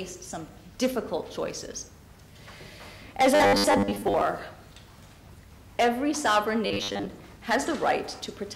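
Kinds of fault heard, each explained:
Robotic sound from repeated short buffers: from 3.35 to 4.21 s and 6.66 to 7.06 s the sound turns into a rigid metallic buzz at 100 Hz, likely from 10 ms chunks repeated over about half, then most, of the audio. Unlike dropouts, it leaves no silence.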